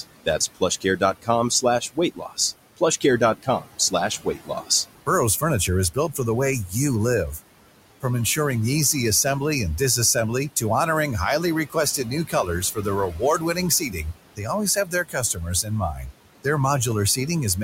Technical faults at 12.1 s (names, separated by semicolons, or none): noise suppressor artifacts; speech cut by the noise suppressor